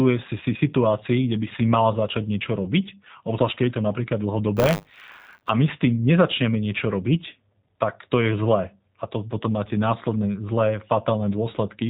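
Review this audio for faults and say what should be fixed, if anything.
Throughout the clip the speech sounds slightly rough and synthetic, with nothing above 4 kHz. This is plainly audible G.729 codec damage, consistent with an 8 kbit/s low-rate speech coder.

From 4.56 to 5.50 s, just after "to napríklad", a robotic 100 Hz buzz rides on the speech. This is buffer tearing: writer and reader have slipped, so a small slice of each roughly 10 ms buffer replays audio from about 40 ms earlier.

Send the speech over a wideband or higher-bitrate codec, and keep the audio writer far enough ahead of the hardware read pointer that the two never cross.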